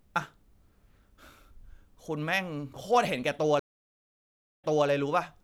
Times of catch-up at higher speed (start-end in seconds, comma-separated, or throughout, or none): none